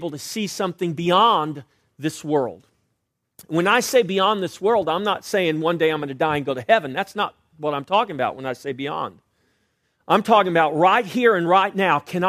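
No dropouts, clicks, distortion or level jumps are audible anywhere in the speech, so there are no technical faults to report.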